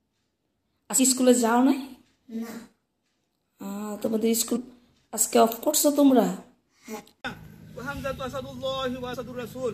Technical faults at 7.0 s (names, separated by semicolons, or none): damaged data in a compressed stream